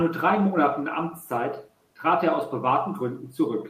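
Nothing goes wrong anywhere in the speech here, with just a faint bed of background from the room sitting about 45 dB beneath it.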